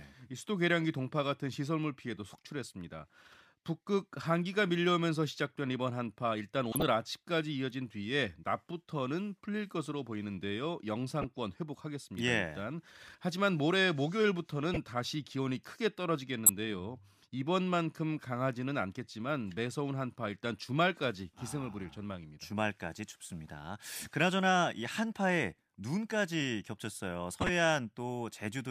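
Short chirpy blips at 6.72 to 6.83, 11.19 to 11.24, 14.74 to 14.77, 16.46 to 16.49 (loudest, near -10 dBFS) and 27.41 to 27.49 s are corrupt frames decoded anyway, where flipped bits throw energy into the wrong frequencies for a frame or several.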